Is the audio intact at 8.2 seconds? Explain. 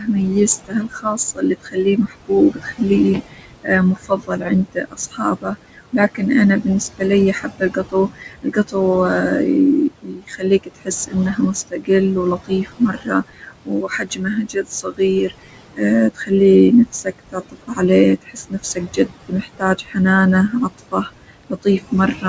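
No. Around 8.2 s the sound falls inside a stretch of speech cut by the noise suppressor, running from 0.65 s to 8.76 s. The suppressor mistook parts of the speech for background noise and turned them down along with it, by up to about 21 dB. In all, about three seconds of this span are affected: soft consonants and word endings come out swallowed or faint.

Noise suppressor artifacts also run through the whole clip, including this moment. The room noise, sitting about 11 dB below the speech, is pushed down by about 21 dB wherever the processor judges a frequency band to be noise. That decision changes frame by frame, so the leftover noise sinks in gaps and rises under the speech around 8.2 s.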